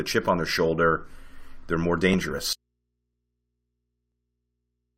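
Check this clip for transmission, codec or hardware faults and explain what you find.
Two kinds of fault are present: overlap between stream segments, heard twice, and a dropout to a faint residue that runs to the end of the clip.

Overlap between stream segments occurs at 2.14 s, just after "they're more", and again at 4.12 s. At those boundaries between one-second segments, two segments' timestamps overlapped, so the player trimmed away a few milliseconds of real audio. The waveform jumps across the cut, giving a small click or skip.

The audio dropout to a faint residue starts at 2.53 s, again after "they're more". The speech cuts off abruptly rather than fading, and the rest of the clip holds only mains hum about 55 dB below the signal, likely from an input left live after the source was lost.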